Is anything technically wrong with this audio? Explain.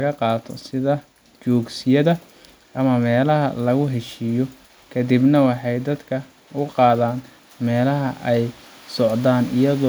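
No, nothing technically wrong turns up anywhere in this speech recording.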